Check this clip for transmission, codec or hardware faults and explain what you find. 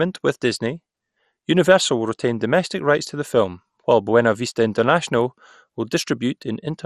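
One codec fault is present, affecting the whole speech clip. Throughout, it sounds dull and gurgling with nothing above 14.3 kHz, likely MP2 compression starving upper sub-bands of bits, consistent with about 64 kbps.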